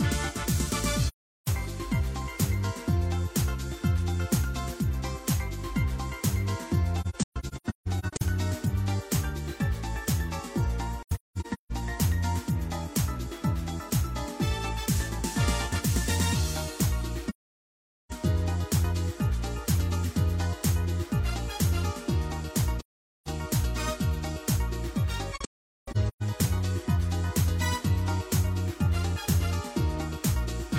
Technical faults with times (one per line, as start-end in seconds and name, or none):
1.08-1.47 AAC frame loss with muting
7.01-8.22 AAC frame loss with muting
11.03-11.72 AAC frame loss with muting
17.29-18.12 AAC frame loss with muting
22.80-23.27 AAC frame loss with muting
25.35-26.23 AAC frame loss with muting